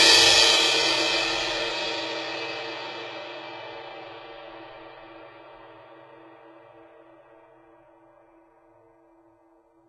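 Throughout the music, treble sounds gritty and metallic, likely heavy HE-AAC compression near 16 kbps; a spectrogram shows upper bands as smeared copies of lower ones.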